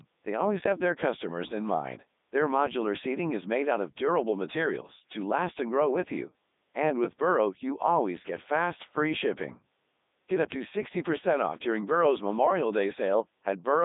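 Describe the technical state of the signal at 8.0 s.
At 8.0 s, like the whole clip, it's Codec 2 vocoder: speech resynthesised from sine waves, robotic and buzzy, nothing above 3.8 kHz, which fits its 3.2 kbit/s mode.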